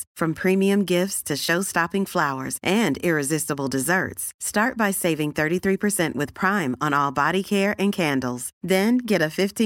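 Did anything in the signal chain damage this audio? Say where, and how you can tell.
No, nothing in the chain damaged this speech.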